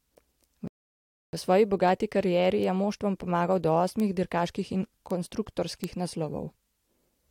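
At 0.68 s the speech halts in a rebuffering stall. Playback ran dry and waited, leaving 0.66 s of silence until 1.33 s, then resumed exactly where it stopped, so time is added but nothing is lost, unlike a dropout. Bit error spikes follow at 2.64, 4.00, 5.11 and 5.84 s: each is a single sharp, broadband tick, consistent with one corrupted sample jumping and returning, with no relation to the surrounding speech, unlike an edit click or clipping.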